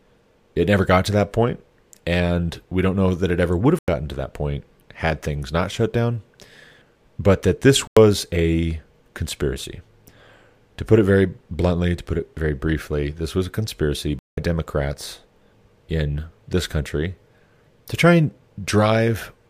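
The speech drops abruptly into dead silence three times: from 3.79 to 3.88 s, right after "it ever would have"; from 7.87 to 7.97 s, after "but that this" and before "a conspiracy"; and from 14.19 to 14.38 s, after "this was a conspiracy". Each is a corrupt frame muted: damaged compressed frames were rejected by the decoder and replaced with silence. The gaps fit two or three lost frames apiece, and the speech resumes on time.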